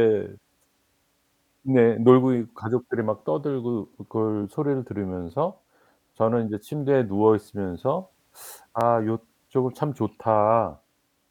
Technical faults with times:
3.85 dropped samples
5.30 dropped samples
7.82 dropped samples
8.81 dropped samples

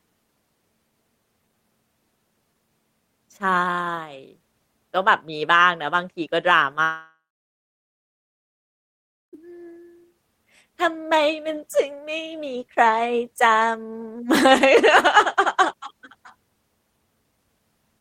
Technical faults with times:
6.83-9.35 long network dropout

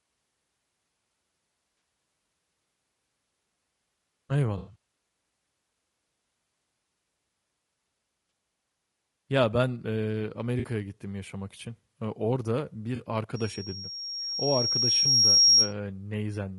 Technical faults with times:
0.00-16.59 low-delay AAC compression
1.77-1.81 AAC frame loss with concealment
4.57-4.75 AAC frame loss with concealment
8.29-8.31 AAC frame loss with concealment
10.59-10.65 AAC frame loss with concealment
12.95-13.01 AAC frame loss with concealment
13.35-15.73 loudspeaker feedback squeal
15.03-15.06 AAC frame loss with concealment

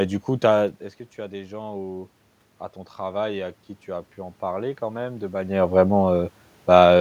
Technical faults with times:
2.98-5.62 automatic gain rising

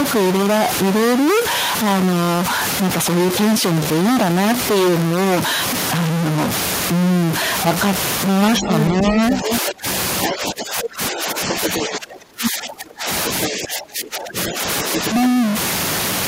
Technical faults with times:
0.00-16.27 stuck bit
8.53-9.57 other side's voice leaking through
8.60-15.00 speech suppressed in double talk
10.22-10.87 other side's voice leaking through
11.49-11.85 other side's voice leaking through
13.26-13.49 other side's voice leaking through
14.48-15.09 other side's voice leaking through

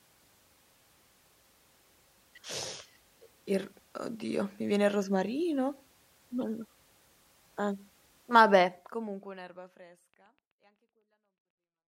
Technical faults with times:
10.14-11.77 train of clicks

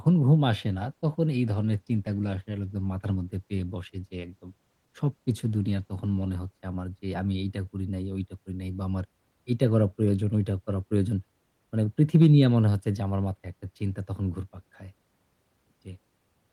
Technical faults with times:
0.66-6.91 call bitrate drop

